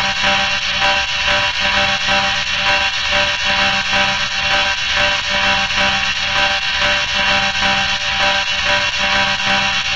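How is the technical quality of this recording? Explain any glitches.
No glitches to explain: the recording of sounds holds steady throughout, with no technical faults audible anywhere in it.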